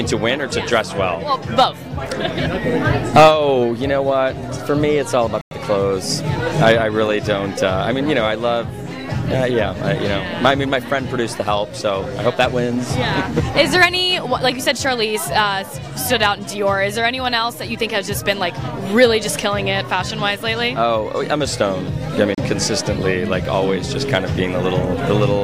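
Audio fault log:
5.41 to 5.51 s and 22.35 to 22.38 s, Bluetooth stall: The wireless link likely hit interference that delayed packets until the headphones' buffer emptied, so playback halted while the retransmissions were awaited. The sound drops to dead silence for about 100 ms in the first gap and about 30 ms in the second, then resumes abruptly, producing a clean hole in the audio rather than a crackle or a fade.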